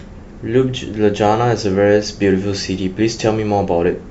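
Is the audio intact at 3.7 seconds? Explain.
Yes, at 3.7 seconds the speech plays through cleanly, with no dropout, click, distortion or other audible fault at that point.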